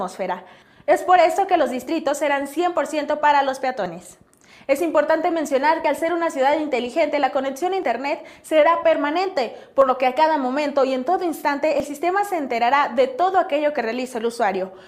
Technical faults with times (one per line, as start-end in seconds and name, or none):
1.87 overlap between stream segments
3.86 overlap between stream segments
5.84 overlap between stream segments
7.83 overlap between stream segments
9.82 overlap between stream segments
11.80 overlap between stream segments
13.79 overlap between stream segments